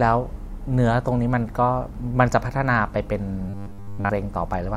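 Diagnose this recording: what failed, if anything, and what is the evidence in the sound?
Robotic sound from repeated short buffers from 3.50 to 4.12 s: the speech collapses into a rigid, metallic buzz at 100 Hz that still roughly tracks the syllables. The likely cause is a buffer underrun at the driver or buffer stage. New audio arrives too seldom, so the output keeps replaying its last 10 ms block instead of fresh samples. That 10 ms repeat sets the fixed 100 Hz pitch, and around 70 percent of that stretch is repeated material.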